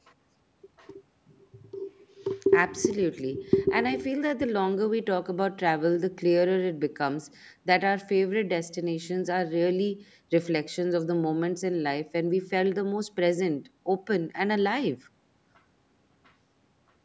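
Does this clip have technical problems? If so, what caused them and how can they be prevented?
No, nothing stood out on listening to this speech clip.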